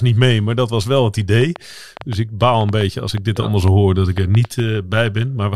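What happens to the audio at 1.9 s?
At 1.9 s the speech sits inside a train of clicks. It starts at 1.41 s, just after "dat was wel het", and runs to 4.61 s. About fifteen similar clicks arrive at roughly 4.7 per second, with uneven spacing. Their peaks rise a few dB above the speech, so they tick and pop over it and through the pauses. The likely cause is interference from nearby equipment or a faulty connection or power supply injecting repeated pulses.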